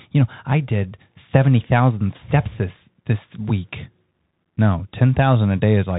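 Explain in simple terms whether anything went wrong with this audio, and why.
Bluetooth CVSD headset codec damage runs through the whole clip, from the first second to the last. This is the narrow codec a headset uses for calls: each tiny moment of sound is sent as a single up-or-down step, and the step size keeps adjusting. Nothing above about 3.8 kHz gets through, so the speech sounds muffled and boxy. Sharp s sounds come out scratchy, and a grainy hiss sits underneath.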